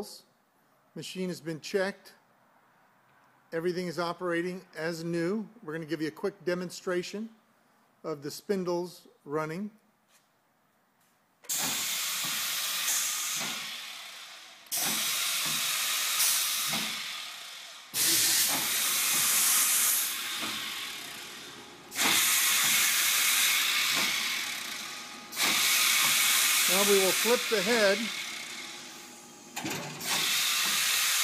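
There are no technical faults to describe at any point in time.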